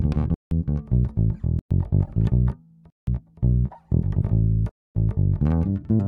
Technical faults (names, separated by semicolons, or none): block of digital silence; corrupt frame decoded